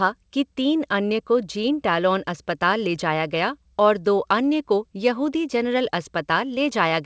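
A speech recording with no technical fault anywhere in it. It has passed through a call path whose codec leaves nothing above 8 kHz, which fits G.722 wideband coding.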